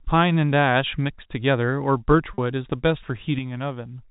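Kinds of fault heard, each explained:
Packet loss with pitch repetition: 40 ms of audio went missing and the last pitch period was repeated, so 2.34 to 2.38 s sounds briefly held and buzzy.
One channel drops out: one stereo channel was likely lost, so from 3.39 s to the end the sound abruptly falls by about 6 dB.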